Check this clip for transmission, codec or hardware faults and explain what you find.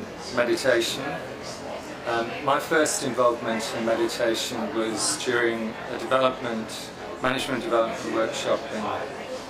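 One fault runs through the whole clip: channel delay (comb filtering). One channel lags roughly 20 ms, and mono summing cancels evenly spaced frequencies from about 20 Hz upward. The result sounds rough and slightly doubled, and a spectrogram shows fixed, regularly spaced notch stripes.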